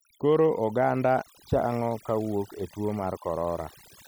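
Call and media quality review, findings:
Overdone noise removal, throughout. Denoiser set too aggressive: bands near noise estimate gated out, taking quiet speech detail with them. Lowered background breaking into twinkling specks.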